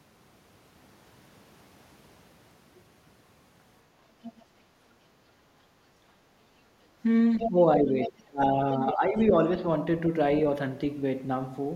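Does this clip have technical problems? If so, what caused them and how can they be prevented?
Yes. A second voice leaks through at 4.23–4.43 s, 7.39–7.49 s, 8.03–8.10 s and 8.88–9.23 s. It is likely loudspeaker echo the canceller missed, faint at first and nearly as loud as the talker near 7.4 s. Headphones or better acoustic isolation between loudspeaker and microphone would prevent it.

Between 5.95 and 6.80 s the room background is gated by the echo canceller. The ambience dips by as much as 6 dB, over about 0.7 s of that span. Gentler suppression settings or comfort-noise filling would prevent it.

From 7.49 to 9.62 s the talker's speech is suppressed in double talk. While the other side's voice overlaps, the speech dips by about 20 dB, likely because the canceller treated both as echo. A full-duplex-capable echo canceller would prevent it.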